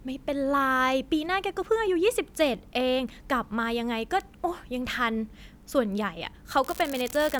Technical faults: unreliable data bit

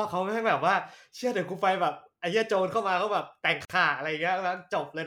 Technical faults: gap at a join of encoded pieces

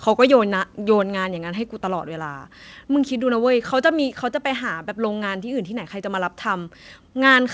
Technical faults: microphone volume stepped down

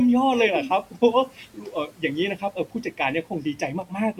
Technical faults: channel delay (comb filtering); speech cut by the noise suppressor

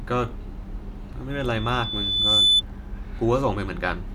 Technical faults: loudspeaker feedback squeal

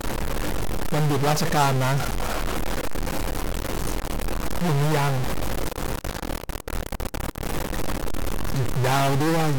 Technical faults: stuck bit

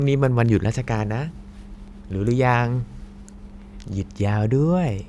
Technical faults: none

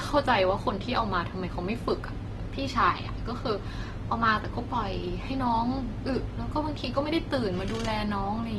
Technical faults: Opus compression

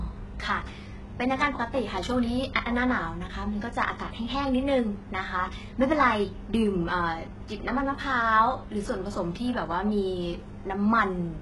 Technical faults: HE-AAC compression

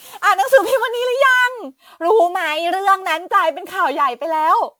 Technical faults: generation loss

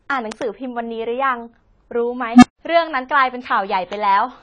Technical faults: AAC compression; loud pop; unstable filter

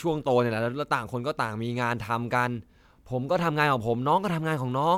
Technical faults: generation loss

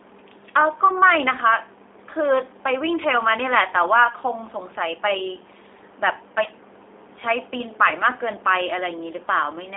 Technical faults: G.729 codec; VoIP packet loss concealed by the speech codec

